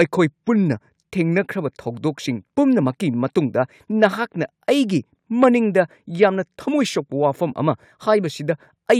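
A recording of speech with nothing technically wrong in the signal, showing no audible fault anywhere in the clip.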